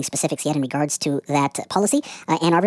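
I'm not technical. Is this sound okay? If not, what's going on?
No, it isn't quite right. The whole clip has a wrong sample rate problem. The speech is being played back faster than it was recorded, 1.5 times too fast, which fits audio recorded at 16 kHz but played as if it were 24 kHz. Speed and pitch rise together, so everything sounds hurried and about seven semitones higher than it should, a bit chipmunk-like, from start to finish.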